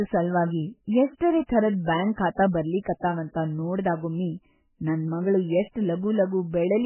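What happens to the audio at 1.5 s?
Just before 1.5 s, a brief smear of hiss runs from 1.47 to 1.49 s, about 26 ms of noise ahead of a sharp onset, which then lands soft rather than crisp. This is pre-echo. The codec spreads its quantisation noise evenly across a transform block, so noise sized for the loud attack leaks into the quiet moment just before it, where nothing masks it.

That moment also carries the dull, watery quality heard across the whole speech clip, with nothing present above 3 kHz and heavy swirling damage to what remains. This is likely MP3 compression at a very low bitrate, around 8 kbps. Starved of bits, the encoder cuts the treble at a fixed frequency and zeroes weaker frequency lines, which flicker on and off between frames, producing that swirly texture and blurring attacks like this one.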